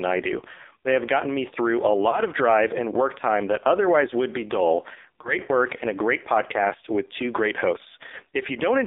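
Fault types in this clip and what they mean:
AMR narrowband mobile codec: The speech passed through a narrowband mobile coder that models the vocal tract and excites it with sparse pulses. Here it ran at a very low rate, which points to roughly 6 kbps. Only a band from 300 Hz to 3.7 kHz survives, so the voice is thin and boxy. The coding damage is heavy, giving a buzzy, synthetic quality throughout the clip.
lost AMR speech frames: A speech frame failed its error check, and the decoder covered the gap by replaying its last good pitch and vocal tract settings at reduced gain. Each loss fits a single 20 ms frame, but the concealment and recovery stretch the disturbance longer. This happens twice, from 2.10 to 2.21 s and from 5.22 to 5.37 s. Each time the sound briefly dips or warbles, then returns weak or rough for a moment.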